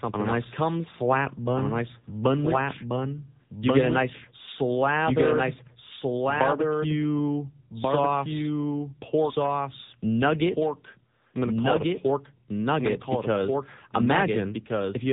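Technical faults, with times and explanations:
Throughout: doubled audio track, a second full-band copy at roughly equal level trailing by about one and a half seconds, likely from a duplicated capture path.
Throughout: AMR narrowband mobile codec, nothing passes above 3.8 kHz, and the pulse-driven speech model at a low bitrate gives plainly audible buzzy, synthetic coloration.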